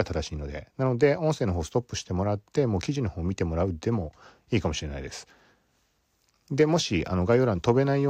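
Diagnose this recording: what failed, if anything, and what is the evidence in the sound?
Nothing failed: no stage in the chain, from capture through to playback, leaves an audible defect anywhere in this speech recording.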